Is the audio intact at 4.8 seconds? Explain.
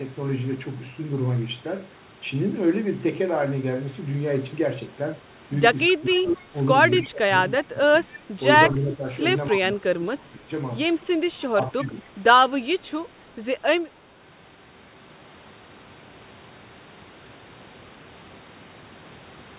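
Yes, the speech is intact at 4.8 s, heard through a call path whose band stops at about 4 kHz.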